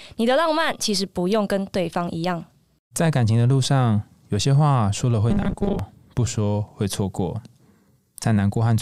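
Robotic sound from repeated short buffers, 5.30 to 5.79 s: the speech becomes a rigid 200 Hz metallic buzz, likely from a 5 ms buffer replayed for about half that stretch.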